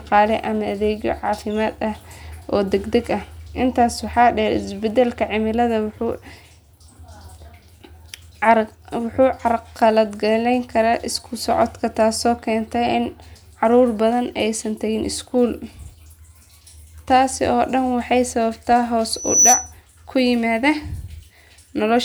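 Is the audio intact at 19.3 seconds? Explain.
No. From 19.13 to 19.72 s a loudspeaker feedback squeal takes over: a 5.9 kHz tone swells over roughly a third of a second to sit well above the speech, stopping just before "ku yimaada". The microphone-to-speaker loop regenerates that frequency, and this swelling onset is what sets it apart from a steady interference whistle.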